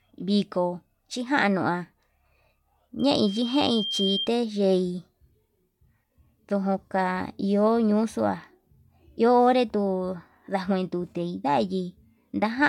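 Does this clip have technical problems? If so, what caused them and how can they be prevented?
Yes. Between 2.99 and 4.30 s there is loudspeaker feedback squeal. The microphone is picking up the loudspeaker it feeds, and at 3.2 kHz the gain around that loop exceeds one, so the frequency keeps reinforcing itself. It is heard as a pure tone that swells over about a second into a piercing squeal, reaching roughly the same loudness as the speech before it stops. To prevent it, keep microphones behind and away from loudspeakers, lower the gain, and notch out the ringing frequency with an equaliser.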